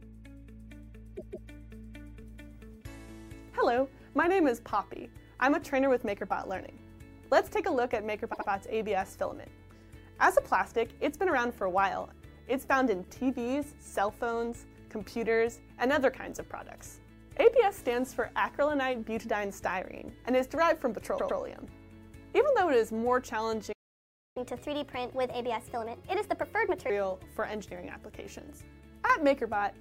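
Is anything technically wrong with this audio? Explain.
Yes. Repeated frames at 1.16–1.48 s, 8.32–8.48 s and 21.17–21.38 s replay blocks of about 157, 78 and 105 ms twice more each. The result is stuttering, and the waveform shows identical copied segments.

A playback stall silences the output from 23.72 to 24.37 s, for about 0.63 s. It likely comes from the player running out of data, and shows as a flat waveform and blank spectrogram.

A catch-up at higher speed follows from 24.37 to 26.90 s. The audio plays at 1.25× with pitch raised about four semitones, so the spectrogram shows harmonics shifted upward.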